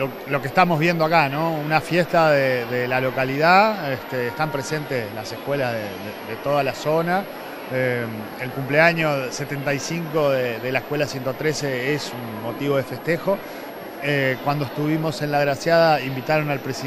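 Throughout the clip a switching supply whistle sits high in the spectrum, wandering between about 11.3 and 12.3 kHz, roughly 30 dB below the sound. A power converter running in audible burst mode or beating with another one causes it, and the moving pitch sets it apart from a fixed-frequency tone or mains hum.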